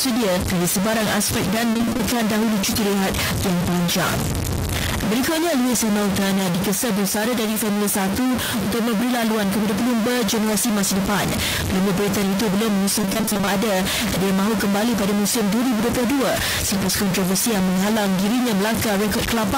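Throughout the speech there is a gritty distortion, and the pauses fill with noise instead of falling silent. This is a stuck bit, likely a data bit held at a fixed value, which separates it from ordinary clipping that only distorts peaks.

From 1.73 to 2.01 s, repeated packet loss (robotic sound) chops the speech into fragments. Gaps of up to 20 ms, pointing to about seven lost packets, are patched by repeating the last sound. Half the span is concealed this way, unlike a clean dropout that just goes silent.

At 4.14 to 4.16 s a single loud pop, likely an electrical transient, stands about 10 dB above the speech, which continues underneath. Unlike a click from lost data, nothing goes missing.

From 13.01 to 13.49 s the same repeated packet loss returns, with about twelve gaps of up to 20 ms and half the stretch filled with repeated sound. It gives a longer robotic, choppy passage.

At 17.23 to 17.25 s a second loud pop, again about 10 dB above the speech, lands on top of the audio without interrupting it.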